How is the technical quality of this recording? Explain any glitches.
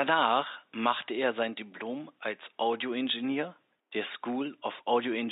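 No glitches can be heard anywhere in the recording, and its technical quality holds up throughout. A faint room noise sits in the background, about 54 dB below the speech, and belongs to the recording space rather than the system.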